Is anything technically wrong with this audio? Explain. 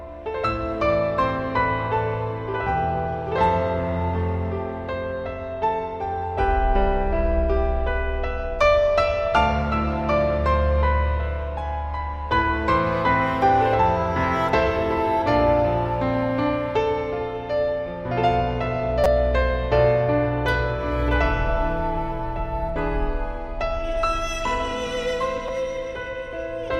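Yes, there are two repeated buffer faults. At 19.04 s and again at 25.48 s, new audio did not reach the output in time, so the device replayed its last block of roughly 5.33 ms, which fits a 256-sample buffer. At 19.04 s that block plays three extra times, losing about 15 ms of audio. At 25.48 s it repeats once, losing about 5 ms. Because each block is so short, the hard joins come across as a brief click or buzz rather than an audible stutter.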